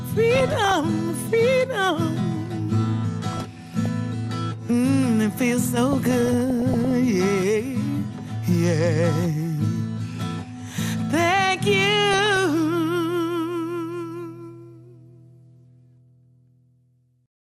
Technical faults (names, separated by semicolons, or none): MP2 compression; DAB burbling